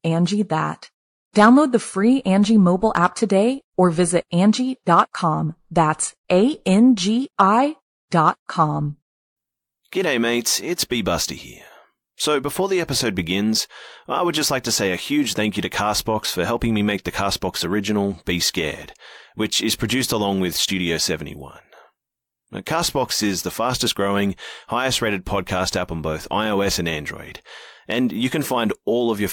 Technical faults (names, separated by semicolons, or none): none